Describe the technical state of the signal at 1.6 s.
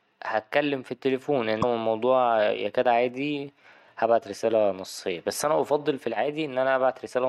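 Right after "هتكلم في التليفون", from 1.61 to 1.64 s, the speech skips ahead and there's a brief disturbance before "الموضوع يكاد عادي هبعت" carries on. That's most likely a broken MP3 bit reservoir. Frames got dropped, so the next one reached back for borrowed data and decoded bytes from a different frame. The roughly 28 ms damage fits about one 26 ms MP3 frame, and it comes out as a chirp, noise burst or short gap.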